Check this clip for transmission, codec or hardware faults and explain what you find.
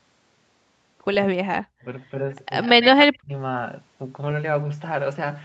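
Three faults show up in this speech, all typical of a hands-free call.

Speech suppressed in double talk hits from 1.27 to 1.86 s and again from 2.76 to 3.31 s, roughly half a second each time. The speech dips by about 40 dB or breaks into pieces, likely because an echo canceller mistook the talker for loudspeaker echo during overlap and turned everything down. The waveform collapses there, and the spectrogram shows dark gaps.

An echo leak runs from 2.62 to 2.87 s: a faint copy of the speech trails 98 ms behind, about 10 dB below it. The likely cause is an echo canceller letting loudspeaker pickup through. On a spectrogram, the harmonic patterns repeat with a slight horizontal offset.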